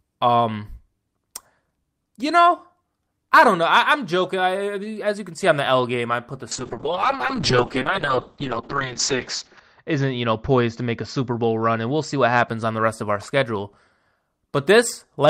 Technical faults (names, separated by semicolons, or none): call bitrate drop